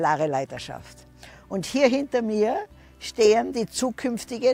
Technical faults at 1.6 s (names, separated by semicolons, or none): none